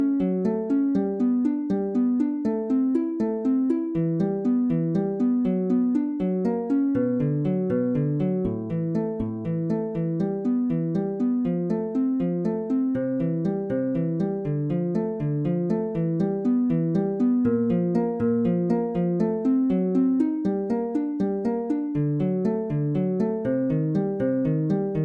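No technical faults are audible.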